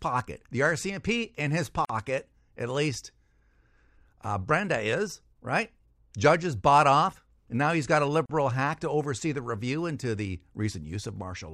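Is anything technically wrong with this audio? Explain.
Yes. There is a gap at a join of encoded pieces at 1.85 s, just after "in his", and at 8.26 s, between "now he's got a" and "hack to oversee the". The speech was encoded in separate pieces and joined untrimmed, so encoder start delay and final-frame padding remain. The speech breaks off in gaps of about 46 ms and 39 ms, with smeared edges, then resumes where it stopped.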